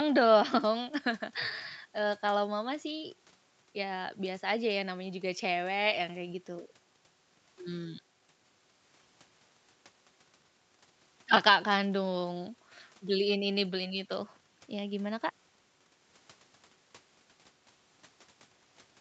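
No technical faults are audible.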